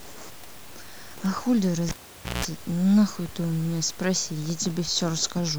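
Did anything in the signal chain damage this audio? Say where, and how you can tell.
Yes. The damage is in the analogue wiring: a live cable pulled and plugged in again. At 1.89 s a pop cuts the speech, and the signal drops to near silence for about 511 ms. Within that gap comes a 60 Hz mains buzz lasting about 175 ms, as the plug's tip touches before the shield connects. A second pop at 2.45 s marks full contact, and the speech returns.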